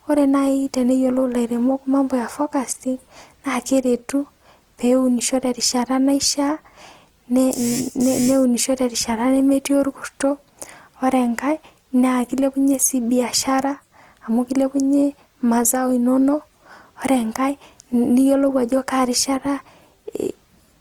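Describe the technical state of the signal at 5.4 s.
At 5.4 s the speech carries Opus compression, present throughout, likely from music-mode coding near 24 kbps: noise-filled bands sound grainy and rough, and the spectrogram shows dense texture up to 20.2 kHz without holes.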